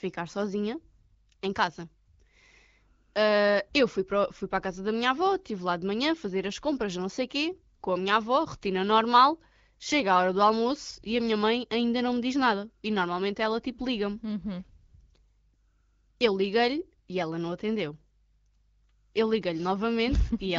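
No fault registers in the speech, the AMR wideband (HD Voice) path at 12.65 kbit/s carrying it with only the light coding character expected at that rate.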